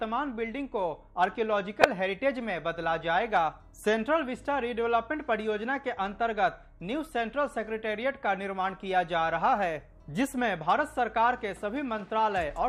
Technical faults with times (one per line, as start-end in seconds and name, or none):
1.81-1.84 corrupt frame decoded